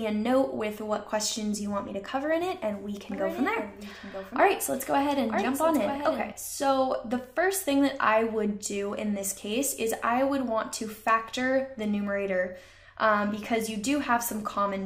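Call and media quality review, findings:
Doubled audio track, 3.12–6.32 s. Full-band copy trails by about one second, roughly 10 dB down, dry, abrupt edges. Likely a second, slower capture path mixed in.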